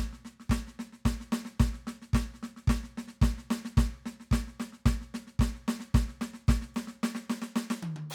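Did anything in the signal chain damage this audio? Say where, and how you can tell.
No, nothing in the signal chain has damaged this music. No stage between source and playback leaves anything audible on it.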